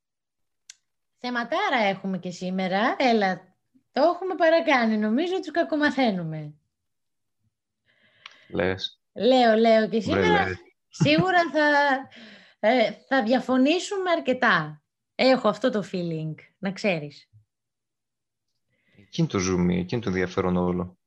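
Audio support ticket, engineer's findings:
Engineer's findings: no faults found in the speech audio.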